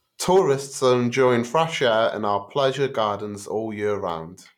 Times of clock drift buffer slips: 0.66-4.10

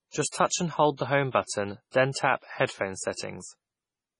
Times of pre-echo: 1.31-1.34, 1.91-2.16, 2.66-2.69, 3.14-3.18

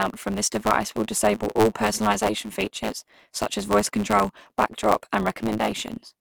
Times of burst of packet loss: none

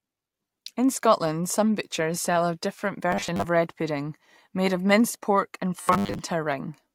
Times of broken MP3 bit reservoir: none

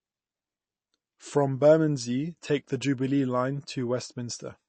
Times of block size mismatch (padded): none

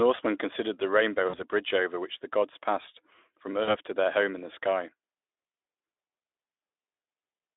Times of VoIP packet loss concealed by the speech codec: 1.29-1.43, 3.64-3.75

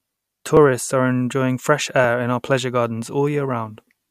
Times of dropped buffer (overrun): 0.57, 2.04

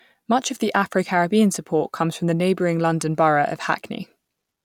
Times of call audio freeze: none

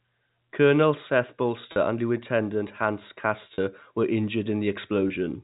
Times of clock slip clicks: none

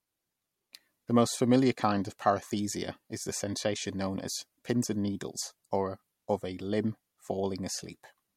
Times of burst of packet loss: none

